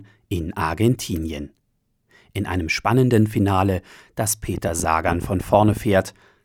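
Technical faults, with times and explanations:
4.55 to 5.78 s, train of clicks: for about 1.2 s a run of around fifteen near-identical sharp pulses ticks over the speech at roughly 12 per second, but at an uneven, stuttering pace rather than a steady beat. The clicks peak about 5 dB above the speech, so they stand out as popping even where the talker pauses. The cause is likely electrical interference from nearby equipment or a faulty connection or power supply repeatedly injecting short spikes into the signal.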